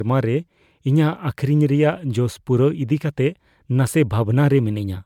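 A speech clip that sounds swirly and hollow throughout, with smeared, blurred attacks and a bandwidth reaching 20 kHz. The cause is likely generation loss from MP3 being encoded about three times over, at a rate that fits 128 kbit/s.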